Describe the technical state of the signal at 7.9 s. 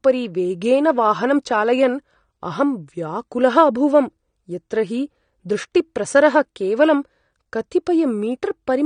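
At 7.9 s the speech sounds dull and smeared, with a warbly, fizzy edge on sibilants and nothing above 9.7 kHz, as it does throughout the clip. This is likely AAC compression: the encoder quantised its frequency lines coarsely and lowered its cut-off, which fits a low bitrate of around 32 kbps.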